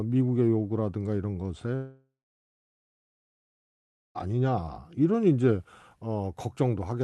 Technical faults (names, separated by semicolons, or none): long network dropout